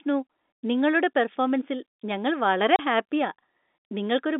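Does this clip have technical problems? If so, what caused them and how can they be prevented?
Yes. There is packet loss filled with silence from 2.76 to 2.79 s, right after "നിങ്ങളുടെ പെർഫോമൻസിൽ ഞങ്ങൾ വളരെ". The receiver inserted a 30 ms hard-edged gap, which fits three lost 10 ms packets on the G.711 telephone-band line. Packet loss concealment and a jitter buffer on a less congested network would prevent it.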